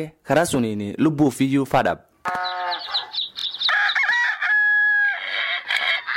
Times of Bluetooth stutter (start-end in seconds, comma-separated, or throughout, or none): 3.39-3.45